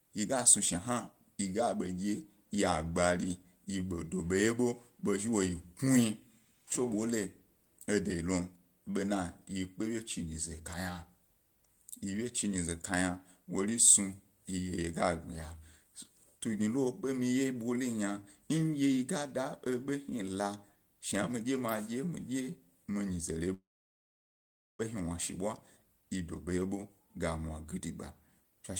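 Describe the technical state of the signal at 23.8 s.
At 23.8 s the speech is inside a long network dropout running from 23.53 to 24.81 s, likely caused by packets not arriving. The last sound briefly continues as a fading buzz, then about 1.17 s of silence follows, and speech resumes with roughly 1.26 s missing.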